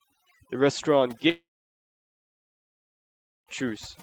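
From the start, the speech has overdone noise removal. The noise reduction acted too hard. It cut individual frequency bands whenever they sat near the noise estimate. Quieter parts of the voice went too. The background drops and breaks up into twinkling specks.

At 1.29 s the sound breaks off. A short fading buzz or hiss carries on briefly. Then about 2 s of silence follows. Audio returns at 3.49 s, with about 2.2 s missing. This is likely a long network dropout, with the receiver filling the gap.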